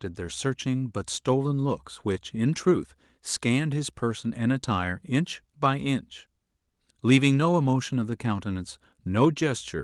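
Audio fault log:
throughout clock drift between sender and receiver: small hiccups at uneven intervals; the sender's clock runs roughly one and a half percent slow, draining the receiver's buffer.
1.22–9.78 s repeated timing corrections: playback runs at about 98% speed as the receiver repeats short pieces, adding roughly 150 ms overall to keep pace.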